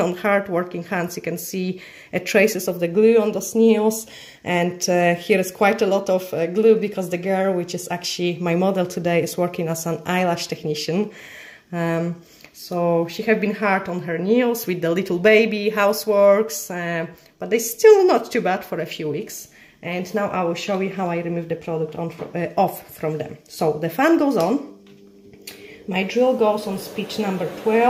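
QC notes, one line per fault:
No faults heard anywhere in this clip.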